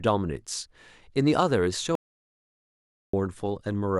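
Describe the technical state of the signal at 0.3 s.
At 0.3 s the speech signal is intact, with no audible fault at that moment.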